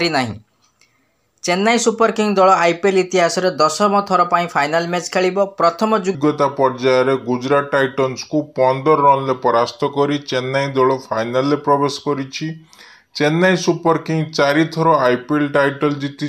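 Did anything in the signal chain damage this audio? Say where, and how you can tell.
Yes. From 6.15 s onward, a section at the wrong speed plays at 0.783x, roughly four semitones low, likely from a playback clock mismatch. On the spectrogram, harmonics drop and stretch.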